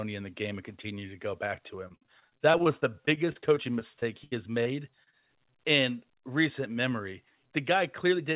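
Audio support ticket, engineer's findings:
Repeated packet loss (robotic sound), 1.88–4.67 s. Choppy, metallic speech with about twenty dropouts, the longest 76 ms, and roughly a sixth of the stretch concealed. Network loss; the decoder keeps extending the previous frame. Spectrogram: smeared, frozen harmonic blocks broken by discontinuities.

Short concealed packet loss at 5.03–5.08 s and 5.10–5.14 s. Two brief smears, each about 20 ms missing, patched over 29 ms and 20 ms. Loss concealment continues the prior pitch or noise, then crossfades back. Waveform: short, overly regular cycles with a soft seam at each rejoin.

Jitter buffer speed-up, 7.60–8.33 s. Speech runs at about 107% speed with pitch unchanged and sounds hurried. The receiver trims pitch-period chunks, around 50 ms in total, to shrink buffer delay. Spectrogram: harmonics stay level while syllables and gaps compress; waveform shows splice points between periods. 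The call path band-limits everything to 4 kHz, which fits G.711 A-law at 64 kbps.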